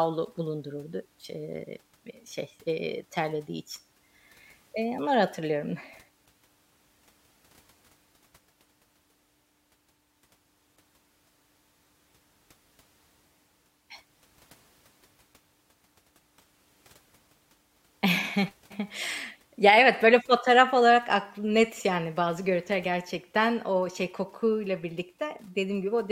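Speech recording with no audible technical faults detected.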